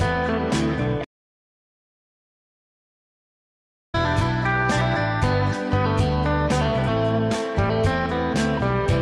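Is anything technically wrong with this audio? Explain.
Yes, there are two kinds of fault.

From 1.05 to 3.94 s there is an audio dropout to silence. The input was lost for about 2.9 s, likely through a disconnected device, failed link or stray mute. The sound stops abruptly and returns mid-flow, with no room tone in between. On a waveform this appears as a flat line, and on a spectrogram as a blank band.

Compressed frames skipped occur at 5.48 to 5.54 s and at 6.83 to 6.88 s. Whole codec frames were not played, so the audio jumps ahead by roughly 300 ms and then 200 ms. That fits several frames of 46.4 ms each being dropped. On a spectrogram, each join shows as a discontinuity in the patterns on either side.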